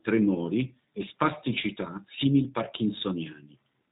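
From start to finish the speech carries G.729 codec damage, with roughness consistent with an 8 kbit/s low-rate coder rebuilding each frame from a filter, pitch predictor and sparse pulses. It sounds plainly rough and synthetic. A spectrogram shows nothing above 3.8 kHz and smeared, blocky harmonics.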